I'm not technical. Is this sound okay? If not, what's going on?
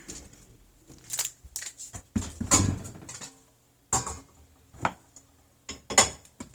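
No. Throughout the clip the sound is grainy, rough and noisy, likely from heavy Opus compression, which fills in discarded detail with noise.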